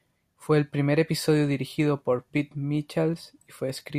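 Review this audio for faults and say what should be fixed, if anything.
A dropped buffer (overrun), likely from capture samples not being collected before the hardware overwrote them, splices the speech at 3.14 s, skipping a few milliseconds. Giving the capture thread higher priority or larger buffers would prevent it.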